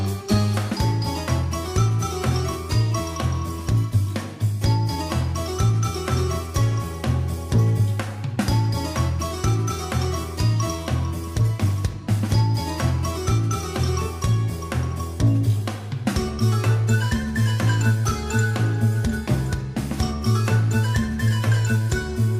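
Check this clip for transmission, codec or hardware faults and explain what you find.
No faults detected.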